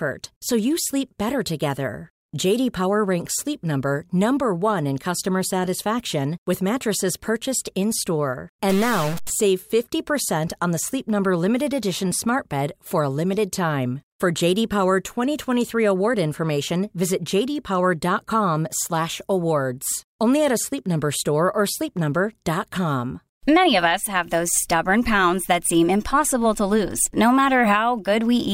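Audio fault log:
8.70 to 9.30 s, stuck bit: for about 0.6 s one data bit was likely held fixed by a failing converter or data line, so roughly half the samples jumped by that bit's weight, a step of around -25 dBFS, in a pattern following the waveform. The speech turns harsh and buzzy. Near-silent stretches fill with a steady noise floor, since that bit would normally change with the sign of small values.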